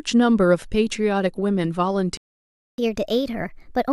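At 2.17 s the speech cuts out into a playback stall, about 0.61 s of silence, likely the player running dry or its thread getting blocked. From 2.78 s to the end it's catch-up at higher speed: the backlog gets played 1.25 times fast, so the pitch jumps up about four semitones.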